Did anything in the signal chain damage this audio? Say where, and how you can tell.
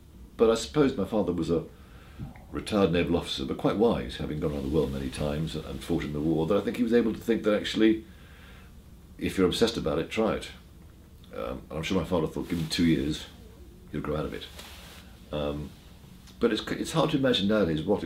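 No, nothing along the way seems to have done this audio any harm; I can't hear anything going wrong at any stage.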